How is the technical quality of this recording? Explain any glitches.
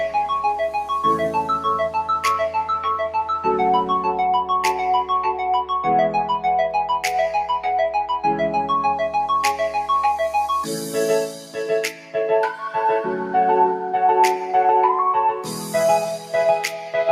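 The technical quality is compromised by a speech-oriented noise suppressor processing non-speech sound, plus four moments where it clamps down hard.

Noise suppressor applied to music or sounds: throughout the clip, the suppressor treats sustained tones, ambience and reverberant tails as noise and pulls them down, while sharp onsets pass. The result is a restless level that swings by around 5 dB, with a fluttery, thinned texture. Unlike compressor pumping, which follows overall loudness, this follows how steady the sound is: held material sinks even when quiet.

Sound cut by the noise suppressor: at 11.28 to 11.57 s, 11.9 to 12.15 s, 15.32 to 15.74 s and 16.18 to 16.33 s, the suppressor misjudges the sound as noise and removes much more than elsewhere, with dips of about 8, 10, 9 and 7 dB. Decays are chopped short and sustained parts sag while transients survive. This distinguishes it from a dropout or gate, which would silence everything abruptly.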